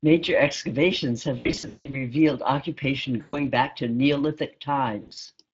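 Throughout, the Speex codec is running at a rate that points to roughly 20 kbps. Its damage is plainly audible: the speech comes out noisy and hoarse, with a grainy roughness on every stretch.

From 1.37 to 2.04 s, VoIP packet loss concealed by the speech codec removes about 380 ms of audio scattered over 560 ms, with the longest gap 180 ms. The decoder repeats its last pitch and filter at falling gain, so the speech smears into a buzzy tone or coloured noise that fades, and stays weak and distorted briefly after packets resume. The same happens for 120 ms at 3.21 to 3.43 s, and again from 5.01 to 5.26 s, where 140 ms is lost in gaps of up to 60 ms.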